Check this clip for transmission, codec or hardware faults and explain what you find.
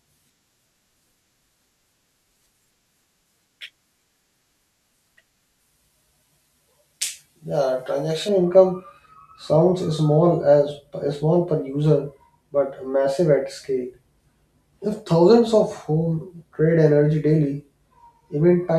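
There's one fault here: pre-emphasis left on, from the start of the speech to about 8.29 s, clearing up just before "income sounds small". The treble was boosted for recording or transmission and the matching de-emphasis never got applied, so the top end stays lifted. The shape fits a J.17 curve, with 10 kHz sitting about 11 dB hot relative to 1 kHz. You hear it as thin, over-bright speech with sibilants that spit and hiss.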